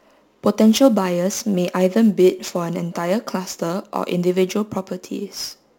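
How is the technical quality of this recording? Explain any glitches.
The recording has a persistent fault: sample clock jitter, present from start to finish of the speech. The converter's clock wanders by around 10 microseconds, so each sample lands slightly off time, and the error tracks how steeply the waveform is changing. It adds a gritty hiss, roughly 25 dB below the speech, that swells on loud and sibilant moments and drops away in pauses. A spectrogram shows a diffuse high-frequency haze riding on the voiced segments and vanishing in the gaps.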